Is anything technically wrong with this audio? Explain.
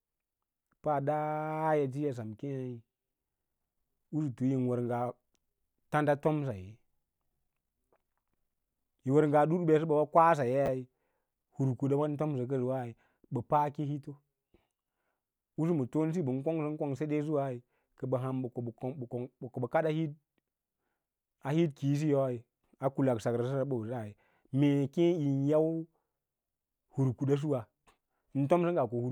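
Yes. At 10.66 to 10.68 s the speech has chunks out of order: one 10 ms block arrived late and was played one chunk after the block that should have followed it. The result is a brief jumbled moment where the sound steps backwards, with three hard joins. Unlike a dropout, nothing is missing and no silence or gap appears. The material is all present, only swapped in sequence.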